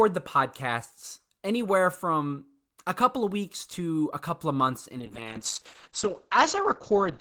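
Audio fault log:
5.05–7.21 s, call bitrate drop: right after "couple of months in" the speech turns coarse and muffled and stays that way to the end of the clip. The call's bandwidth estimate fell, so the encoder was starved of bits. The sound fits a drop from about 32 kbps to 8 kbps. At that rate Opus quantises the spectrum roughly, giving a watery grain, and it narrows the coded band from 20 kHz to 8 kHz, removing the upper sibilance and air.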